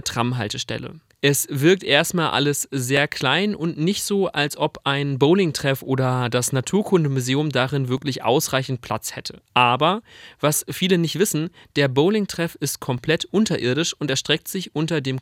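Speech with overlapping chunks: each 5.0 s chunk starts 6.5 ms before the last ends, replaying a sliver at 2.97 s (after "wirkt erstmal alles"), 7.98 s and 12.98 s, seen as thin vertical click lines.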